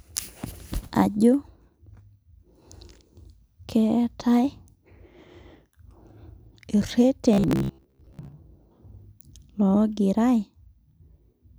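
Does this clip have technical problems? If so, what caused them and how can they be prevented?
Yes. Between 7.33 and 8.32 s, new audio was likely arriving too slowly, so about half the time was filled by replaying the most recent short chunk instead of playing real audio. The 66.7 Hz repeat rate fits a chunk of about 15 ms. The result is robotic sound from repeated short buffers, a stiff metallic buzz at 66.7 Hz that only loosely follows the speech. A larger playback buffer, or giving the audio thread higher scheduling priority, keeps fresh audio flowing and prevents it.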